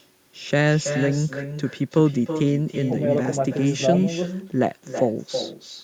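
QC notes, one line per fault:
throughout, echo with no canceller: every phrase returns about a third of a second later, some 9 dB quieter and thinner, as the far-end loudspeaker feeds its uncancelled microphone.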